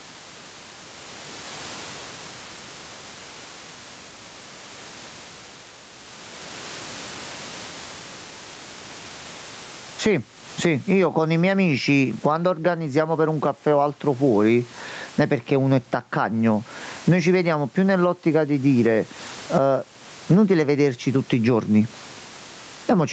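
Throughout this speech clip there is gain pumping, with the level swinging by around 20 dB, so loud and soft passages sit unnaturally close together and the speech sounds squashed. The likely cause is gain set far too high ahead of a fast limiter or compressor. Unlike a noise gate, which cuts the gaps to silence, this pulls the gain down on loud sounds.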